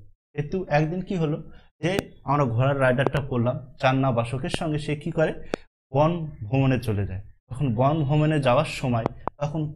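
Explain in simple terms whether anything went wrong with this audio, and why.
Sharp loud pops cut in at 1.99–2.01, 4.54–4.56 and 5.54–5.56 s, with quick double pops at 3.07–3.19 and 9.06–9.30 s, each far louder than the sound continuing underneath. They are likely sudden electrical jolts, from a plug, switch, static or glitch.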